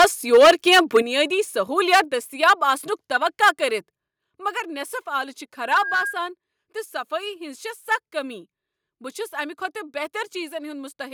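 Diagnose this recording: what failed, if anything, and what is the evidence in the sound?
Harsh, crackling edges flatten the loudest peaks at 0.00–0.05 s, 0.33–0.97 s, 1.78–2.00 s and 2.43–2.53 s, just before "آسنُک توقع کٔرتھ", overshooting by about 10, 12, 6 and 2 dB. This is likely microphone overload: input gain set too high, so the converter clipped the waveform tops.

Sudden drops in level of the whole sound, about 7 dB at 1.02 s and about 4 dB at 2.04 s, each arriving right after a clipped burst. This points to the microphone volume being stepped down, likely by the call processing reacting to the overload and lowering device input gain.

From 5.61 to 6.21 s a steady 1.6 kHz tone swells over roughly a third of a second until it sits about 5 dB above the signal. This is a loudspeaker feedback squeal: the microphone picked up its own playback, and loop gain exceeded one at that frequency.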